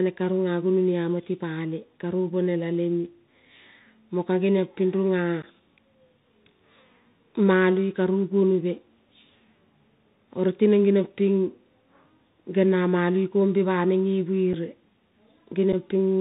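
Throughout, the Bluetooth CVSD headset codec confines the speech below 4 kHz, with scratchy s sounds and a granular hiss that a plain low-pass filter wouldn't add. This fits a 64 kbps CVSD link.

Unconcealed Bluetooth headset packet loss then punches abrupt holes after "mo ka geniompin runa" at 5.42 s (11 ms), and at 14.53 s and 15.72 s (7.5 ms each). Unlike longer dropouts, each is an abrupt-edged gap of just two or three lost packets.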